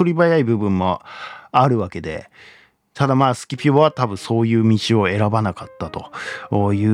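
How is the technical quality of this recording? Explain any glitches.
No glitches or technical faults are audible here.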